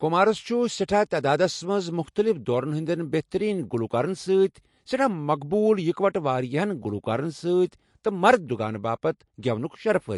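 From start to finish, the speech carries plainly audible damage, likely from MP3 compression at a low bitrate, which fits about 48 kbps. Nothing is left above 11.3 kHz. The encoder ran short of bits and dropped the treble at that point. It also discarded weak frequency lines, which flicker in and out between frames. The result is a watery, swirling texture. S sounds turn metallic and chirpy. Sharp onsets smear and lose their edge.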